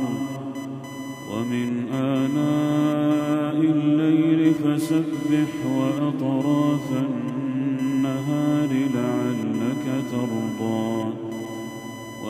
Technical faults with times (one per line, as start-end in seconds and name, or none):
0.00-12.30 computer activity noise